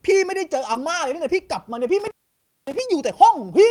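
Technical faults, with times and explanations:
0.73–0.84 s, short concealed packet loss: 20 ms of speech arrived too late. The receiver stretched the preceding sound over 13 ms, adding a few milliseconds, heard as a brief smear.
0.75–0.77 s, lost packet rebuilt from error correction: one 20 ms packet was replaced by its low-bitrate copy. That stretch sounds rougher and noisier, without a gap.
1.99–2.79 s, intermittent contact: a loose connection opened for 562 ms. The speech cuts out with crackle at both edges, leaving faint hiss while the line is open.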